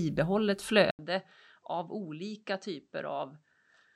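At 0.91 s, after an 80 ms flat gap, the waveform shrinks and the spectrogram stops at 8.3 kHz, adding faint background noise: likely input switched to a poorer device.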